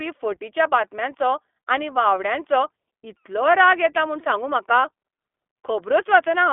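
From start to finish the speech runs through an iLBC codec, squeezed into a 250 Hz to 3.5 kHz line band, so it's thin, slightly rough and synthetic, with the codec damage plainly audible.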